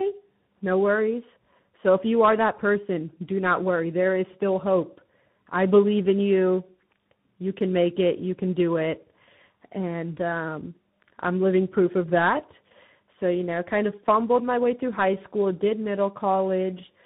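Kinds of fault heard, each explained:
Tandem speech coding: the speech passed through two speech codecs in a row, likely a low-rate CELP coder then CVSD, so it's rough, warbly, and dull above 3.8 kHz.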